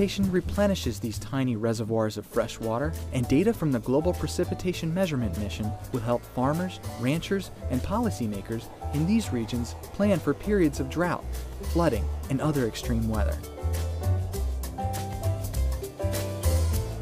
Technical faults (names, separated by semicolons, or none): none